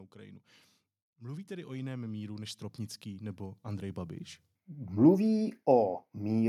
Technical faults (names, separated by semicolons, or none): automatic gain rising